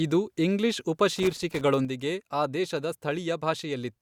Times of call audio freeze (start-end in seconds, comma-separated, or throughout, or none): none